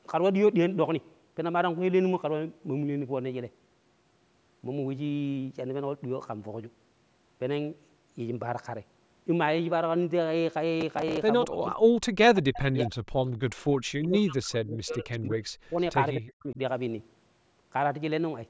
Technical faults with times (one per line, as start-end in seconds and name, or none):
10.81-11.17 processor overload crackle
11.45-11.75 speech suppressed in double talk
12.32-13.00 speech suppressed in double talk
14.01-15.80 speech suppressed in double talk
15.12-15.17 echo leak
16.16-16.59 speech suppressed in double talk